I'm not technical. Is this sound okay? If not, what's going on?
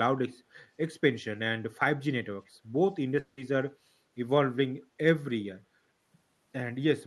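No. Two problems stand out.

Echo leak, from 2.45 to 2.50 s: a very faint, brief copy of the speech comes back about a third of a second late, like a quiet ghost behind the talking. This is likely because someone on the call was using a loudspeaker, and their microphone caught the sound from it. Their equipment is meant to cancel that, but a small scrap slipped through and was sent back.

Long network dropout, from 3.19 to 3.40 s: for roughly a fifth of a second the speech turns into a short fading buzz, and when it returns a piece is simply gone. The likely cause is the connection briefly failing to deliver the sound. The receiving side covered the gap by stretching out the last bit it had heard, so the lost part was never played.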